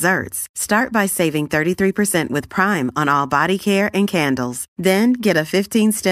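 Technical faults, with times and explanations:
Nothing stood out as a technical fault on listening to this speech recording.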